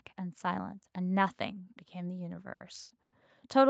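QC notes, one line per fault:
2.53 to 2.62 s, short stall from a late packet: the speech hangs on one sound for about 70 ms, a held, slightly buzzy or dipping smear before it moves on. A packet missed its slot, so the jitter buffer ran dry and the receiver stretched the last stretch of audio until the packet turned up. Playback then resumed from the same point, so nothing is lost, but everything after sits about 70 ms later.
3.02 to 3.14 s, call audio freeze: the speech stops moving and the last sound is drawn out as a fading buzz for about 100 ms, sinking to roughly 20 ms of silence before the audio picks up exactly where it left off. This is likely packets delayed in transit, leaving the jitter buffer empty so the receiver had to fill the wait itself. No speech is missing; the gap instead pushes the rest of the audio back by about 100 ms.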